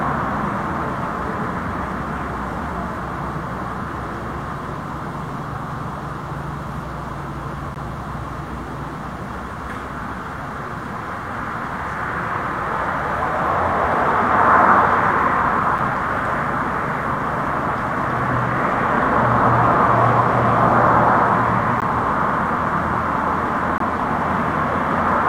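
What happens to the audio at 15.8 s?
At 15.78 s there is a gap between stream segments. Two consecutive pieces of the stream are timestamped slightly apart. The player fills the missing span with silence. About 6.9 ms of dead air is inserted with hard edges, heard as a brief, sharp dropout or tick. Nothing is removed. The sound simply resumes a few milliseconds late. The position fits a boundary between 2-second segments.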